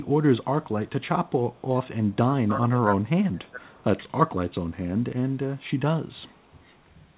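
At 0.86–1.08 s and 1.54–1.61 s there's a faint echo leak, a copy of the speech arriving 449 ms late and about 35 dB down, likely a far-end loudspeaker the echo canceller didn't fully cancel. From 2.25 to 3.84 s the speech is suppressed in double talk, dipping by up to about 20 dB, likely the canceller ducking the near talker while the other side spoke. Inside that stretch the echo leaks through again at 3.45–3.51 s, about 40 dB down. A brief dip of about 5 dB follows at 4.09–4.14 s, and the echo returns at 6.31–6.63 s.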